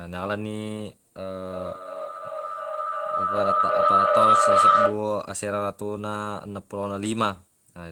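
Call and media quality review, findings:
Feedback howl, 1.32 to 5.11 s: tone near 1.5 kHz pulsing roughly every 0.3 s, peaking about 10 dB over speech. Probable acoustic loop between two co-located call devices.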